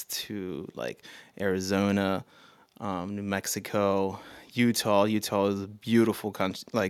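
A short speech recording with no technical fault to report. Nothing wrong can be heard at any point, so there are no times or causes to give.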